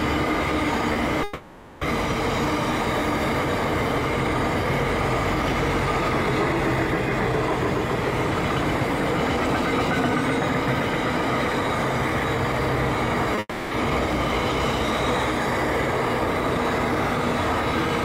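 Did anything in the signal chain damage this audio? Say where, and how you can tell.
Yes, at the network stage. Short concealed packet loss appears at 0.93 to 0.97 s and again at 13.35 to 13.39 s. Each is a brief smear of about 20 ms. The receiver bridged each gap by extending the preceding sound, then blended back into real audio.

A long network dropout runs from 1.23 to 1.83 s and from 13.39 to 13.73 s. Synthetic continuation fades through the first 0.58 s. The second fills 0.32 s, with about 30 ms of near-silence. Audio resumes with those stretches missing, likely from a stalled network link.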